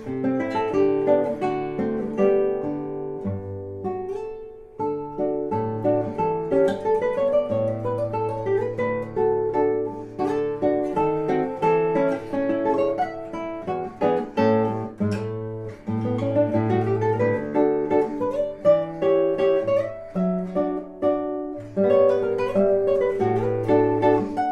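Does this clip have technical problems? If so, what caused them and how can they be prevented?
No, there are no technical problems to be heard in this clip. Nothing in it calls for a fix or any preventive measure.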